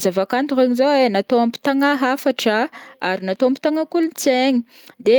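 No technical faults can be heard anywhere in this speech recording.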